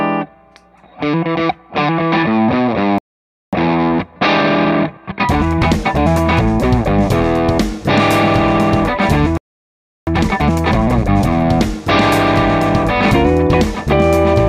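At 2.98 s the player likely ran dry of buffered data, causing a playback stall: the sound cuts off mid-flow and stays silent for about 0.54 s before resuming at 3.53 s. From 3.53 to 6.53 s a time-compressed catch-up follows, as the player trims its backlog by removing and cross-fading short slices. The audio runs 1.15 times fast at unchanged pitch.

A second playback stall, likely from the same data shortfall, silences the output from 9.37 to 10.07 s, about 0.70 s. The catch-up from 10.07 to 11.45 s is harsher, at 1.5 times speed, so the hurried quality is more obvious.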